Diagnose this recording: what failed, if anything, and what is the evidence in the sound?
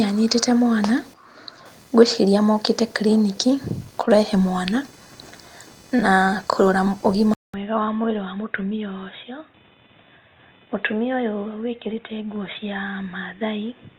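Computer activity noise sits under the whole recording, a failure in the analogue wiring. A buzzy, chirping pulse train repeats at around 500 Hz, some 30 dB below the speech, and it follows the computer's load rather than the talker. Processor, graphics or mouse activity pulls current through a ground shared with the audio input, and that ripple lands in the signal. On a spectrogram it shows as a comb of faint horizontal lines at 500 Hz and its harmonics, continuing through pauses in the speech.

At 7.34 s, right after "na kũrora", the sound drops out for about 200 ms. It comes back duller and boxier, about 5 dB quieter, with a new noise floor roughly 35 dB down, and stays that way to the end. Nothing above 3.8 kHz survives. This is likely an input switched to a poorer device at the driver level, such as a headset's call profile taking over from the original microphone. On a spectrogram the upper band is cut off sharply at 3.8 kHz from 7.34 s on, just after a short blank column. 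The waveform shows a brief flat gap followed by a lower envelope.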